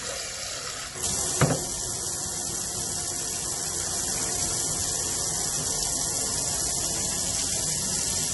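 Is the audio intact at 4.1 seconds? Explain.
No, at 4.1 s it's watery and swirly with nothing above 11.5 kHz, likely MP3 compression running through the whole clip, which fits a bitrate around 48 kbps.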